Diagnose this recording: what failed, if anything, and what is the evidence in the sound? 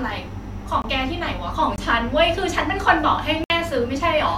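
Blocks of digital silence cut the speech at 0.82–0.84 s, 1.76–1.78 s and 3.44–3.50 s. Each cuts out and back with no fade. The buffer likely went unfilled and output zeros.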